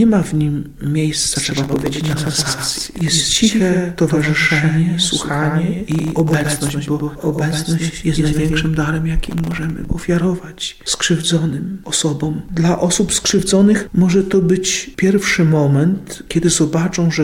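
From 1.35 s to 8.67 s a doubled audio track runs underneath: a full-band copy trails by roughly a tenth of a second at about 5 dB down, likely from a second, slower capture path. It sounds like a dry slapback, and a spectrogram shows every onset repeated with an abrupt start and stop.

Processor overload crackle appears from 1.57 to 3.08 s, 5.92 to 6.70 s and 9.23 to 9.71 s. Roughly 150, 50 and 40 very short buffers, each under a millisecond, miss their deadlines and drop to silence, giving a gritty tearing over the sound. The waveform shows dense hard-edged dropouts, and the spectrogram shows broadband vertical streaks.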